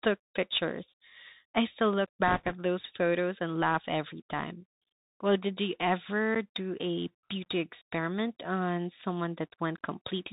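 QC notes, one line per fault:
Throughout: Bluetooth CVSD headset codec. The sound is cut off near 4 kHz, with scratchy sibilants and granular hiss from one-bit delta coding, which fits a 64 kbps stream, unlike plain band-limiting.
2.28 to 2.52 s: bit errors on a Bluetooth voice link. A rushing crackle rather than loud clicks or dropouts, as flipped bits, roughly 2 percent, each nudge the signal by an amount that grows with the speech level, and their effect dies away quickly.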